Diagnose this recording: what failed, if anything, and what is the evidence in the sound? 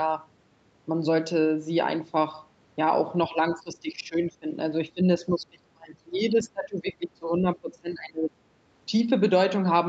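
The failure is in call processing: the speech level falls away from 3.29 to 4.5 s, by about 15 dB, then again from 4.94 to 8.32 s, by about 25 dB at its deepest. This is likely speech suppressed in double talk, where the echo canceller attenuated the near talker along with the far-end echo.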